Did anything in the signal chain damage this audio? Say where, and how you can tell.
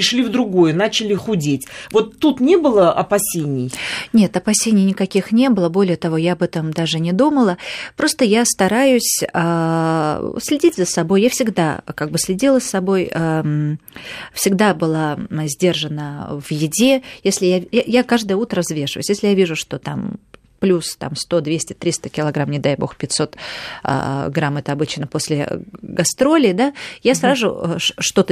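No, nothing audible points to damage at any stage of the signal chain, as the speech keeps steady level, bandwidth and timing throughout.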